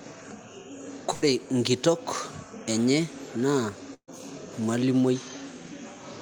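At 1.13 to 1.24 s the speech breaks in a burst of packet loss. About 85 ms is filled by stretching and fading the last sound, and roughly 80 ms of speech is skipped. A second burst follows "enye naa" at 3.94 to 4.09 s. It has about 136 ms of concealment, including roughly 70 ms of silence, with 140 ms lost. On a spectrogram each shows as frozen, repeating bands decaying, then an abrupt jump. The waveform shrinks, flattens or goes silent, then restarts further on.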